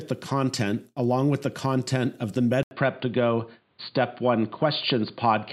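After "the content of the", at 2.63 s, the speech drops out for 80 ms and returns duller, with nothing above 4.7 kHz, a faint new noise floor well below it and little level change. The input likely switched to a poorer device.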